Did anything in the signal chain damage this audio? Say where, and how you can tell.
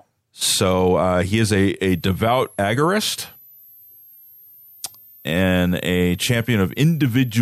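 Yes: a switching supply whistle in the analogue power stage. From 1.9 s to the end, a faint whistle drifting between 11 and 13.5 kHz, roughly 30 dB below the speech, rides under everything.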